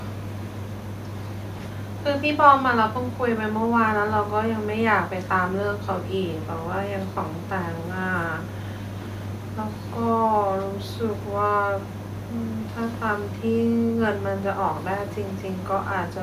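Speech recording with no technical faults heard; the only background is the room's own ambient noise, sitting about 37 dB below the speech.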